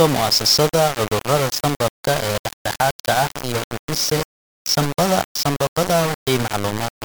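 From start to finish, the speech was likely rounded to 4 bits with no dither, giving low bit depth without dither. The error follows the signal, so the sound is coarse and gritty, distortion nearly matches the speech in level, and quiet stretches drop to silence or sputter.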